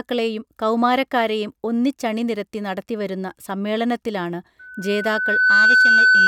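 From 4.59 s until the clip ends at 6.27 s, a single steady tone at 1.5 kHz rises out of the speech, swelling over roughly a second into a piercing squeal that ends up clearly louder than the voice. This is loudspeaker feedback squeal: the microphone was picking up the loudspeaker it was driving, and at 1.5 kHz the round-trip gain exceeded one, so that frequency kept reinforcing itself each pass around the loop.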